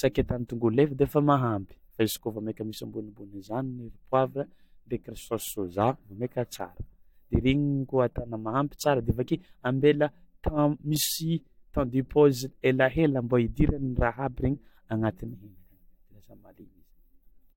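Listening through this recording of speech, nothing stood out as a technical problem.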